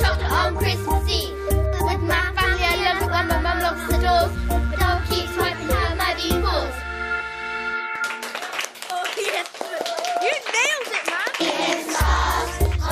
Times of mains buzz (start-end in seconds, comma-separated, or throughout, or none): 4.05-7.74